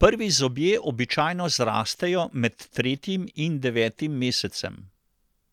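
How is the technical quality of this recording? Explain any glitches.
No glitches or faults heard.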